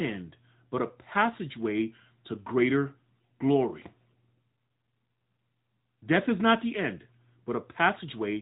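Throughout, the speech has passed through an AMR narrowband mobile codec, rebuilt at 8 kHz from a vocal-tract model and sparse pulses. Nothing above 3.8 kHz remains, so it sounds boxed into a telephone band, with plainly audible synthetic coding damage that fits a 10.2 kbps mode.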